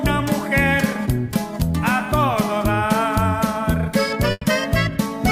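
At 4.31 s a burst of packet loss hits: a run of packets fails to arrive in time, so the receiver extends the last sound it had for about 100 ms, fading it down before roughly 20 ms of silence, ending at 4.43 s. The result is a smeared, dying tail followed by a brief dropout, and when the audio resumes, about 100 ms of the original sound is simply gone, leaving an audible jump.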